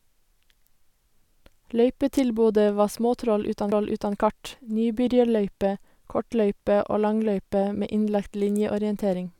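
A CD skip at 3.71 s interrupts this speech clip, just before "kart nybyrjarløype kortløype og". The player loses its place on the disc's spiral track, as from a knock or a surface flaw, and the laser lands on another turn. Output mutes for only about 5 ms, heard as a small tick. Playback then resumes from a different point in the recording, so the speech jumps abruptly rather than continuing smoothly.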